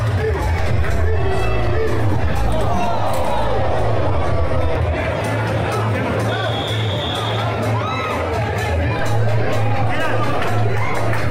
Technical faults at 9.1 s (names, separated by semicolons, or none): DC step